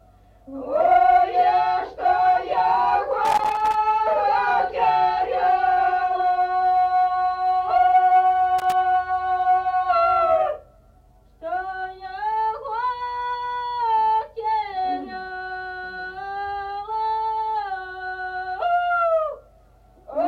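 A worn or dirty contact in a connector is making and breaking as it shifts, producing loose connector crackle. From 3.25 to 3.75 s the signal is chopped into an irregular burst of scratchy crackle. A second, shorter burst follows from 8.59 to 8.72 s, lasting about a seventh of a second.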